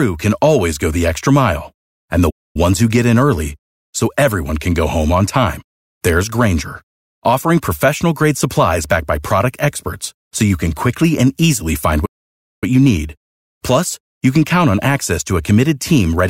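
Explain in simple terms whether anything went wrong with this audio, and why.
A playback stall cuts the speech twice: from 2.30 to 2.56 s, after "the extra mile and", and from 12.05 to 12.64 s, after "quickly and easily find". The sound goes silent for about a quarter second, then over half a second, most likely because the player briefly ran out of data.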